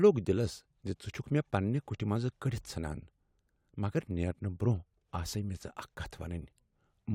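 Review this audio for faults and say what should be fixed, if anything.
Nothing to fix: no audible faults anywhere in the speech.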